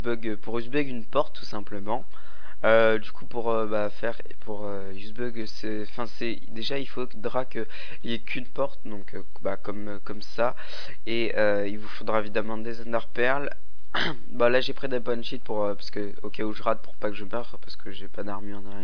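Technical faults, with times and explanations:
No technical faults are audible anywhere in the recording.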